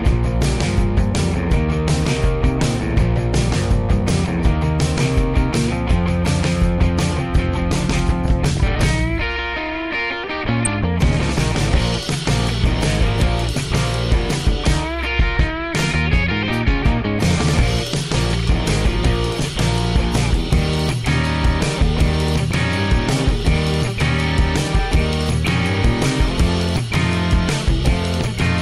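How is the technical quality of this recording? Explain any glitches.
The recording has clear technical flaws: a constant low-rate coding sound and three brief bursts of reception damage.

Throughout, the audio sounds dull and plainly gurgling, with a granular edge. This is most likely MP2 compression at a low rate, fitting roughly 80 kbps. Too few bits switch upper sub-bands off and coarsely quantise the rest.

DAB burbling appears at 8.57 s, from 10.65 to 10.74 s, and from 20.69 to 20.88 s. It is heard as short blips of noise over the sound. Occasional bit errors, around a few per thousand, slipped past error correction and put short blips of noise into individual sub-bands.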